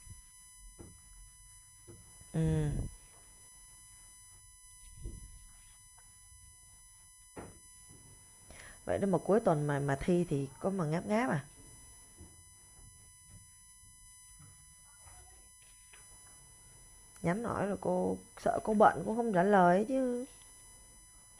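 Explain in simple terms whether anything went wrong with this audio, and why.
A thin, steady whine sits under the speech for the whole clip, built on a 1 kHz pitch and its harmonics, brightest near 10 kHz. This is USB whine: the USB connection's regular 1 ms bursts of current leak into the audio through shared power or ground.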